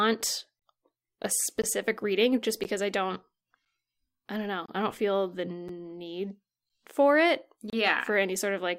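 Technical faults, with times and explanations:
1.62, 2.64, 3.65, 4.66–4.68, 5.68 and 7.70–7.73 s, gap between stream segments: the speech drops into hard-edged silences of 8 to 28 ms, roughly one per 1 s segment, as timestamps leave holes the player pads. One lands after "I don't", another between "I don't know" and "I don't feel the".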